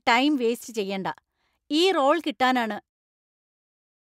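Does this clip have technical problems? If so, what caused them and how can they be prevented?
No, there's nothing to fix in this speech clip; the gentle fade-out near the end, around the 3-second mark, is just a smooth editorial fade with no click or hard edge.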